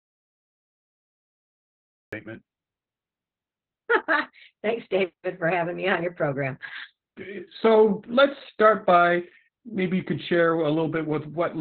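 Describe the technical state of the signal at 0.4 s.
At 0.4 s the signal is in an audio dropout to silence. The clip opens already inside it, and it lasts until 2.13 s. The gap is silent, with no room tone or hiss at all. The input was likely lost upstream, perhaps through a disconnected device or a failed link, while the recorder kept writing empty samples. Whatever sounded in that span is gone, and the speech begins abruptly when the gap ends.

The same moment also sits under Opus voice compression, which covers the whole clip. At 0.4 s it cannot be heard, since there is only silence, but it applies throughout. The codec runs in SILK mode, and the sound points to a very low rate of about 8 kbps, framed in 20 ms blocks. The band is cut to narrowband, with nothing above 4.3 kHz. Coarse excitation coding leaves the speech muffled, hoarse and slightly robotic, with heavy damage.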